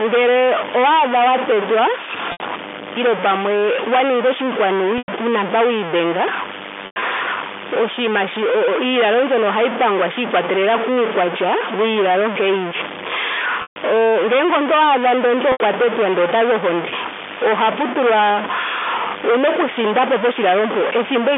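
A speech recording carried over a G.711 A-law telephone line, band-limited to about 250 Hz to 3.5 kHz, has two faults. A data bit is likely stuck at a fixed value throughout, throwing roughly half the samples off by that bit's weight. The result is distortion over the whole clip, with noise filling the pauses. Packet loss with pitch repetition occurs five times. Each time, the receiver bridged the gap by repeating the last pitch period and fading it out. The losses come at 2.32 s (80 ms, after "owaadha wa tetwa"), 4.98 s (100 ms, after "pamwe wa ninga oshinkwanu"), 6.86 s (120 ms scattered over 160 ms), 13.62 s (140 ms) and 15.52 s (80 ms, just before "tetwa ndele otazi ohonde").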